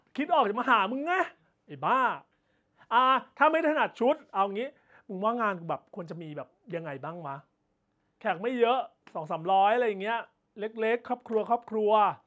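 Nothing goes wrong anywhere in this bit of speech, which just carries the usual mark of a call's microphone processing, with the lowest bass trimmed and nothing above 8 kHz.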